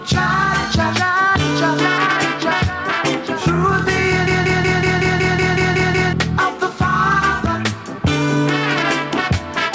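The recording carries call microphone processing, with nothing above 8 kHz, and it has two faults. Throughout, the level breathes, swinging by roughly 10 dB, so loud and quiet passages sit unnaturally close together and the result sounds squashed. That gain pumping is likely caused by input gain set far too high, with a fast limiter or compressor clamping down on each peak and releasing in between.

From 4.27 to 6.13 s a system hang loop replaces the audio. One 186 ms fragment repeats exactly ten times at about 5.38 Hz, giving a rapid machine-gun stutter, and around two seconds of real audio are lost. The fragment length fits an 8192-sample buffer. The host or driver stalled while the sound hardware kept cycling through that same ring buffer.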